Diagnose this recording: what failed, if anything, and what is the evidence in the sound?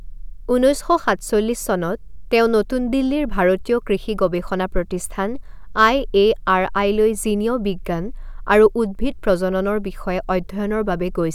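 Nothing in the chain has failed: the speech arrives as one continuous, intact signal, with no point where any stage from capture through to playback leaves an audible mark on it.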